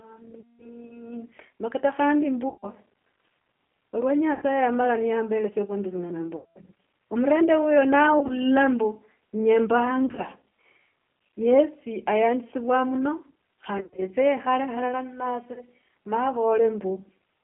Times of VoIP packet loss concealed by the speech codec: 0.40-0.66, 2.49-2.66, 4.34-4.42, 6.36-6.59, 8.19-8.35, 10.06-10.22, 13.78-14.09, 15.53-15.61

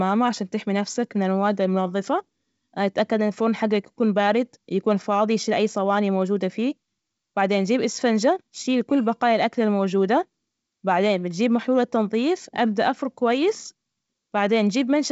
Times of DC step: none

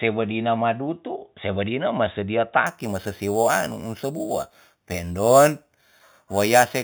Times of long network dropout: none

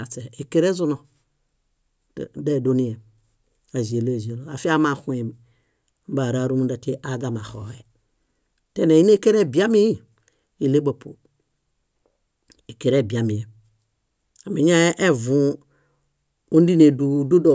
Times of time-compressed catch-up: none

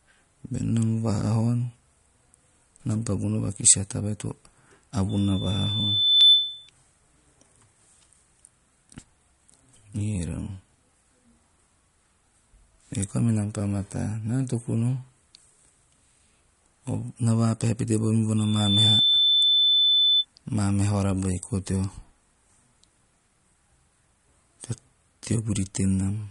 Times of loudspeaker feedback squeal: 5.09-6.70, 18.37-20.25

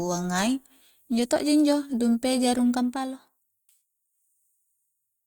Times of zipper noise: 2.75-3.77

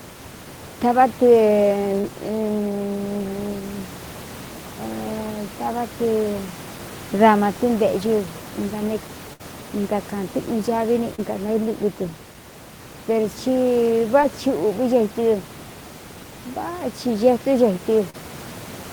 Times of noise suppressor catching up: none

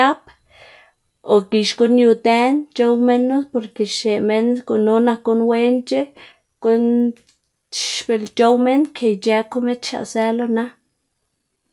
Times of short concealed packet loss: none

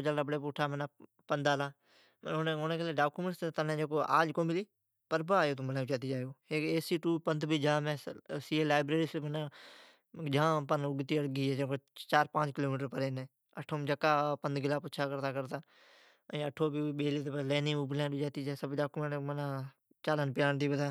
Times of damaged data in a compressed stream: none

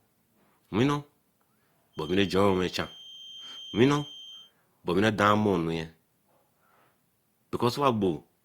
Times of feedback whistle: 1.91-4.54

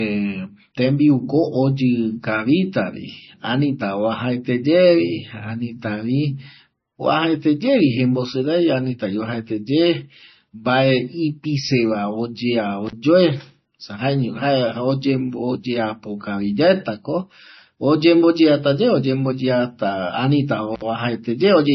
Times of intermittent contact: 12.87-12.93, 20.75-20.82

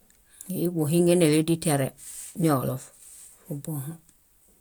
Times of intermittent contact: none

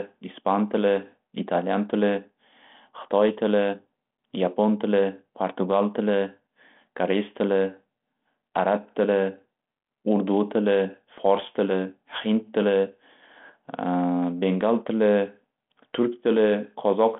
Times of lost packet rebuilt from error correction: none

